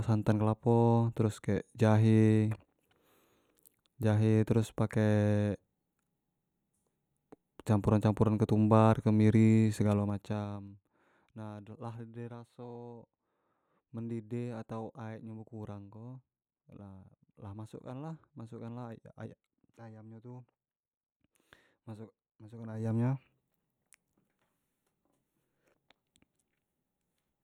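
Zipper noise occurs twice. After "ketumbar kemiri", from 9.81 to 10.77 s, the level falls roughly 15 dB in unsmoothed 2 dB steps, about ten per second, each step clicking. From 22.5 to 22.95 s it rises similarly, stepping about twenty times per second.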